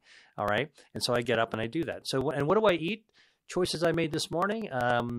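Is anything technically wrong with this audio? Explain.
Yes. From 0.10 s to 5.10 s the speech has periodic USB or driver dropouts. Something on the system stalls the USB bus or the audio driver every 96 ms. Each stall skips about 4 ms of audio outright rather than filling it with silence, which happens around fifty times. The cut joins the waveform at a mismatched point, so the speech carries a steady train of ticks, roughly ten per second, audible wherever there is signal.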